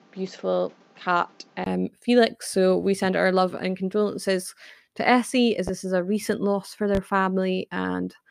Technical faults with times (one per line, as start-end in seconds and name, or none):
0.00-1.66 input switched to a poorer device
5.68-5.71 loud pop
6.95-6.99 loud pop